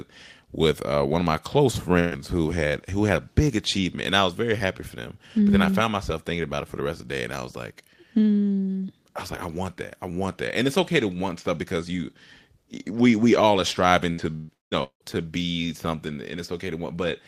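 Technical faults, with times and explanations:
1.99–2.20 s, burst of packet loss: A short run of consecutive packets failed to arrive in time, just after "one of my close". The receiver bridged the hole by extending the last stretch of speech for about 113 ms and fading it down, so a smeared, held sound replaces roughly 120 ms of real audio. Speech then picks up again at "who had who had", with the missing portion simply skipped over.
14.12–15.15 s, repeated packet loss (robotic sound): Packets went missing four separate times in quick succession, starting after "we all are striving". Each hole, the longest about 170 ms, was papered over by repeating and decaying the preceding sound, so synthetic fill makes up about 57% of this second-long stretch. Roughly 540 ms of genuine speech is lost, leaving choppy fragments until "be something".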